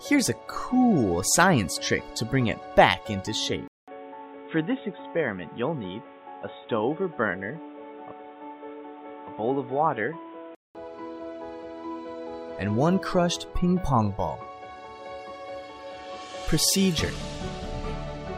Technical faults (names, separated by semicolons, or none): input switched to a poorer device